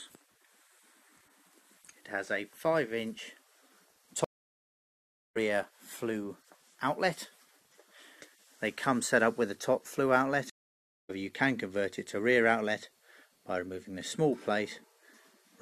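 At 4.24 s and again at 10.50 s a stream reconnect cuts the audio: about 1.1 s of silence, then about 0.6 s. Unlike a simple dropout, the restarted decoder resumes further along, skipping roughly 0.7 s and then half a second of material.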